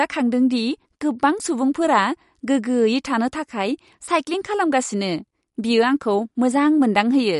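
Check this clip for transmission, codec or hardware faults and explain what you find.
One codec fault is present throughout the speech: MP3 compression is the likely cause. Nothing above 11.2 kHz survives, pointing to a starved bitrate near 48 kbps. The encoder drops the treble and switches weak frequency lines on and off between frames, giving a watery, swirly texture and metallic chirps on s sounds.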